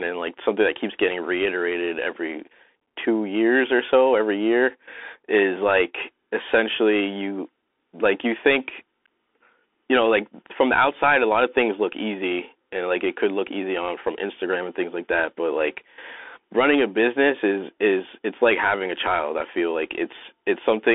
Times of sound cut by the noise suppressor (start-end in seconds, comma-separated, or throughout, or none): none